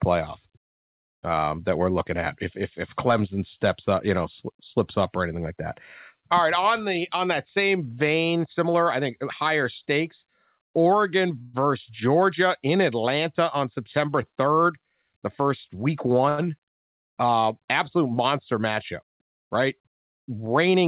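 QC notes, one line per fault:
11.42 to 11.55 s, call audio freeze: the sound halts and the last moment is drawn out as a fading buzz or hiss for about 114 ms. Likely held-up packets emptied the jitter buffer. Playback then resumes where it stopped, so nothing is lost, only delayed.
14.65 to 16.06 s, jitter buffer speed-up: the sound runs about 7% fast at unchanged pitch and feels hurried. The receiver trims tiny pitch-period slices repeatedly, roughly a tenth of a second in all, to shrink an overfull buffer.
16.29 to 16.40 s, short stall from a late packet: one sound is held about 88 ms too long, with a faint buzz or dip. A packet missed its slot, the buffer ran dry, and the last sound was stretched until it arrived. Nothing is missing.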